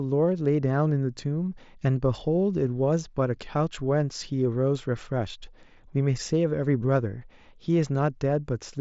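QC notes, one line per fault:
1.80 s, concealed Bluetooth headset packet loss: a brief smear of about 15 ms where the speech holds slightly unnaturally before resuming. Packets from the mSBC headset link went missing, and the receiver filled the gap by repeating the best-matching stretch of recent waveform.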